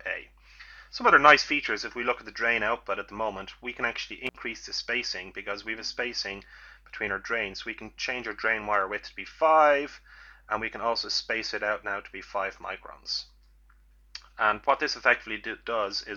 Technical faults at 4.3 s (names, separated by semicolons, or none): intermittent contact